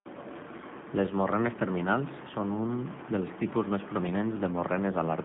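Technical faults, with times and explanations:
Throughout, G.729 codec: The speech is band-limited to a telephone line of about 150 Hz to 3.5 kHz, with nothing above 3.6 kHz. The codec damage is plainly audible. Voices sound rough and faintly synthetic. That comes from rebuilding each 10 ms frame from a vocal tract filter, a pitch predictor and a few pulses, rather than from the waveform itself. The missing top end dulls consonants. The sound fits an 8 kbit/s G.729A stream.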